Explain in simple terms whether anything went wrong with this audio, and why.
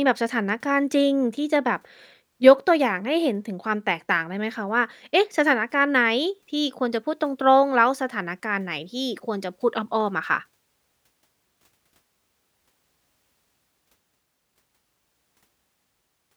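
Nothing went wrong here; no faults can be heard.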